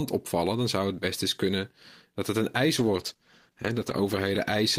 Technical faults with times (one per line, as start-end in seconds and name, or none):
2.79-4.78 call bitrate drop